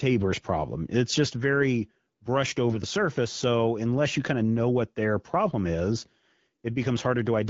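AMR bit errors at 0.37 to 0.46 s and 2.67 to 2.79 s: about 7 percent of weakly protected frame bits arrived flipped, misplacing excitation pulses, so the speech turns briefly hoarse and gargly over the wideband coding, which sounds consistent with an AMR-WB rate of about 12.65 kbit/s.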